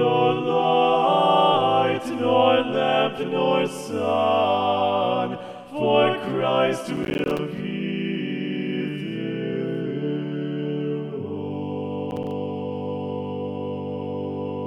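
Processor overload crackle appears from 6.97 to 7.39 s and again from 12.11 to 12.31 s. In both stretches the processor falls behind and misses buffer after buffer, each miss leaving a short hard-edged hole of silence. The dropouts come in quick succession, fitting buffers of around 10 ms, so they fuse into a gritty, tearing crackle over the sound. The first burst is longer and denser, the second brief, and each stops abruptly as the load clears.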